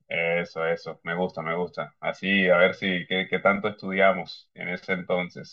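Channel delay (comb filtering) runs throughout: one channel lags about 1.5 ms, carving evenly spaced notches from around 300 Hz, a static hollowness unlike sweeping flanging.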